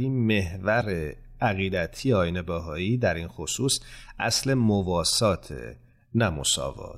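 A likely broken MP3 bit reservoir is behind the one fault in this speech recording: after a gap in the stream, the next frame reached back for borrowed data and decoded bytes belonging to a different frame. The sound jumps forward abruptly at 0.80 s, with a brief glitch running to 0.83 s, about 30 ms, which matches the span of a single MP3 frame of roughly 26 ms.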